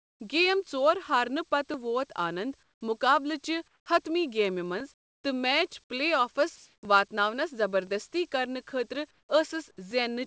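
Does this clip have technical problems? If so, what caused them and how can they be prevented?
Yes. In pauses at 0.00, 2.63, 3.68, 4.94, 6.56 and 9.11 s, each 0.18 to 0.30 s long, the background turns into steady, featureless hiss. This is likely comfort noise in place of the background, inserted by discontinuous transmission. Disable DTX or tune the voice detector.

Periodic USB or driver dropouts occur as brief ticks, each skipping about a millisecond, every 1.02 s from 0.72 s to 9.91 s. Stop the background task that is stalling the USB bus or audio driver.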